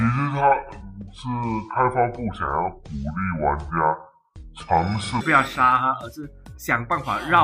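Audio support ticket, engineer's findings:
Section at the wrong speed, 0.00–5.21 s: sound slowed to 0.64x, pitch down about seven semitones, deep and dragging. Likely a clock mismatch in the playback or editing path. Spectrogram shows all harmonics squeezed lower and features stretched in time, jumping back up at 5.21 s. Waveform shows longer periods and drawn-out envelopes.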